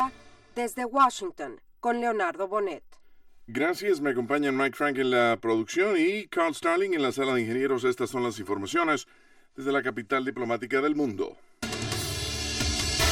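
Channel delay (comb filtering) runs throughout: one channel lags about 3 ms, and the mono sum carves fixed notches from about 150 Hz, hollow and never sweeping like a phaser.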